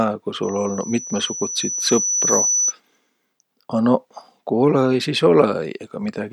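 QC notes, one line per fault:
0.43–2.74 s, loudspeaker feedback squeal: a 6 kHz tone swells over roughly two seconds until it's about as loud as the speech. The mic is hearing its own loudspeaker, and at that frequency the loop gain tops one, so the tone keeps feeding itself.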